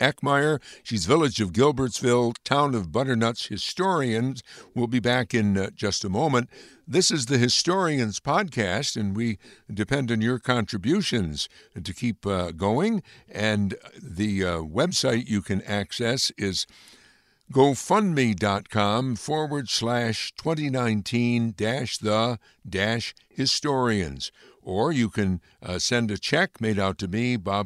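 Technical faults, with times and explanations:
No technical faults are audible.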